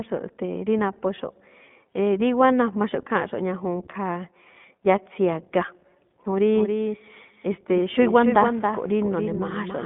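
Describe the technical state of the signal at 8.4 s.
At 8.4 s you're inside a doubled audio track that kicks in abruptly at 6.54 s and runs to the end of the clip. A second full-band copy of the speech trails the original by around a third of a second, a few decibels quieter, with no decay or room colour to it, so it reads as a dry slapback rather than an echo. The likely cause is a second capture path running late, or an edit leaving two copies out of step.

On top of that, the whole clip, this moment included, carries plainly audible iLBC codec damage. The band sits roughly between 150 Hz and 3.5 kHz, with nothing at all above 3.8 kHz, so it sounds thin and telephone-like. Each short frame's excitation is coded on its own, which gives the speech a slightly rough, synthetic grain. The frame timing and texture are consistent with iLBC's 20 ms, 15.2 kbps mode.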